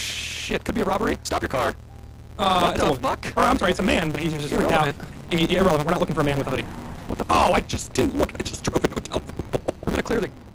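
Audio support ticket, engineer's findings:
Block size mismatch (truncated), whole clip. Steady 150 Hz buzz, audio runs 1.6x fast at near-normal pitch. Upstream stage writes longer blocks than next stage reads, tail of each dropped; fits a 512-sample write block. Unchanged pitch rules out sample-rate mismatch.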